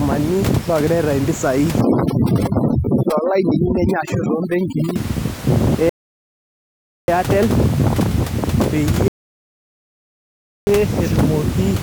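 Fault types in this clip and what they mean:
Overdone noise removal: an over-aggressive denoiser from 1.81 to 4.96 s blanks bands near the noise floor; the spectrogram shows a near-empty floor with isolated specks.
Rebuffering stall: playback ran out of data and paused, leaving flat silent gaps in the waveform at 5.89 s (1.19 s) and 9.08 s (1.59 s).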